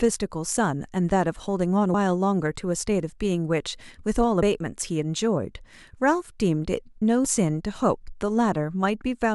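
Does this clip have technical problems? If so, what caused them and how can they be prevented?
Yes: damaged data in a compressed stream causes brief blips at 1.93, 4.41 and 7.25 s, where corrupted bytes make the decoder misread frames and resynchronise on the next header. Checksummed transfer and stored integrity checks prevent it.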